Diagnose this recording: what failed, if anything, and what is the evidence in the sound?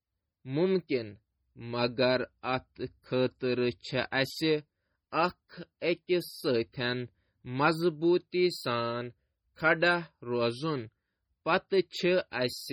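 The whole clip has a watery, swirly quality, with weak detail flickering in and out between frames and chirpy s sounds. That's codec-stage MP3 compression, likely a low-bitrate encode, something like 32 kbps, where the encoder starves quiet frequency lines of bits and drops them.

Pre-echo shows up as a brief hiss just ahead of sharp onsets at 0.87 s, 5.10 to 5.13 s, 5.80 to 5.82 s and 12.30 s, each about 20 ms long. The codec smeared quantisation noise across its block, so the noise leaked into the quiet moment before each attack.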